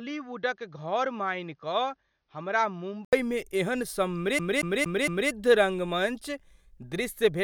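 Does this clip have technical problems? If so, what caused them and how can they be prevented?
Yes. From 0.0 to 3.13 s the speech is dull, slightly quieter and cut above 6.5 kHz, then brightens after an 80 ms gap. This was likely an input switched to a poorer device. Lock the recording input so the system cannot change microphones mid-take.

From 4.39 to 5.30 s, a 0.23 s piece repeats four times with brief mutes. That is a CD stuck on one turn. Clean or replace the disc before transferring it.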